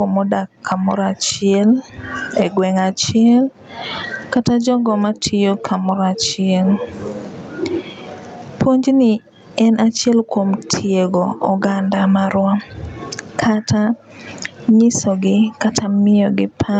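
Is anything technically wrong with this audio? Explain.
Yes. There is gain pumping throughout the speech, and the call path limits the top end to about 8 kHz. The level swings by something like 25 dB. Loud and quiet passages sit unnaturally close together, so the speech sounds squashed. The likely cause is input gain set far too high, with a fast limiter or compressor clamping down on each loud sound and then releasing in the gaps.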